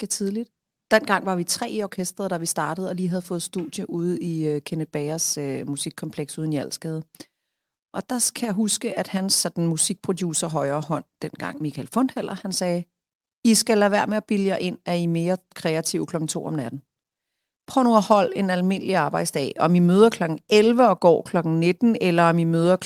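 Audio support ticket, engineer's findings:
No faults found on listening back to the speech recording. Nothing to escalate; ticket can be closed.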